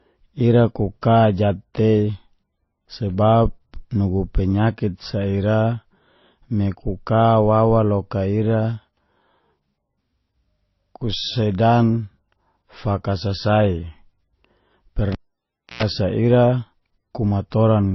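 From the start, the speech has a dull, smeared top with a hard ceiling at 5.8 kHz, alongside swirly, watery artefacts. This is the mark of transcoding between lossy codecs, likely a low-rate MP3 re-encoded to Opus, each pass adding damage. A spectrogram shows an empty band above 5.8 kHz and blotchy, patchy detail below.

At 15.12 s the cable is pulled and plugged in. A pop opens about 0.66 s of near silence, then a 114 ms burst of 60 Hz mains buzz as the tip touches, and a second pop at 15.83 s. On the waveform that is two spikes framing a flat gap with a dense hum block before the second.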